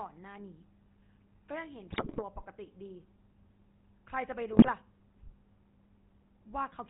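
From the first moment the whole clip has the buzzy, gravelly roughness of the GSM full-rate codec, and the damage is plainly audible. The codec models the vocal tract and drives it with a sparse train of regular pulses, so the natural texture of the voice becomes a grainy buzz. Nothing comes through above 4 kHz, which dulls the sibilants. The overall character fits the old 13 kbps GSM full-rate codec.

There are GSM bit errors in two places. The first runs from about 1.92 to 2.23 s. Corrupted bits reach the decoder and scramble the filter, pitch and gain values it rebuilds each frame from, so the sound breaks into squawks, pops and a gargling wobble for about a third of a second. The second burst, from 4.53 to 4.69 s, is shorter and milder. That suggests fewer damaged frames than in the first burst.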